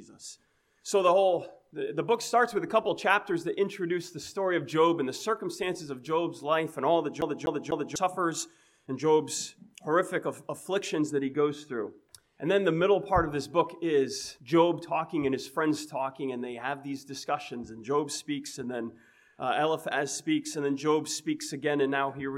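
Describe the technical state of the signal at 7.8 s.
At 7.8 s the audio is caught in a CD stuck on one turn, a skip running from 7.21 to 7.96 s. A scratch keeps throwing the laser back one track, so the same 0.25 s fragment plays three times, each pass ending in a brief mute at the jump. The result is a fast, mechanical stutter. On a waveform the identical segment tiles end to end, separated by tiny gaps; a spectrogram shows the same pattern stamped repeatedly with thin vertical breaks.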